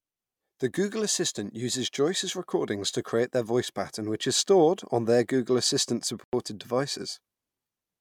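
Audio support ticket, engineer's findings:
Bluetooth stall at 6.24 to 6.33 s: speech drops to dead silence for 90 ms, then resumes. Waveform shows a flat near-silent gap with abrupt edges; spectrogram shows a clean vertical blank band across all frequencies. Likely cause: radio interference delayed packets, headphone buffer ran empty, playback paused until retransmitted packets arrived.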